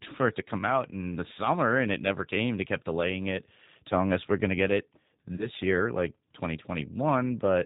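From the start, the whole clip carries G.729 codec damage, and it is plainly audible. The speech is rebuilt from a vocal tract filter, a pitch estimate and a few pulses per short frame. Nothing above 4 kHz survives. Voices come through rough and slightly synthetic. The sound fits the 8 kbit/s G.729A variant, which trades fine detail for a very low bitrate.

At 5.36 s, right after "going to get it", there is VoIP packet loss concealed by the speech codec. About 30 ms of audio went missing, which fits a single lost packet. The decoder filled the gap by extending its last pitch and filter settings at falling gain. The result is a brief stretched sound, a buzzy tone or coloured noise that fades. Recovery lags, because each frame builds on the previous one. Normal sound returns by 5.47 s, before "year like".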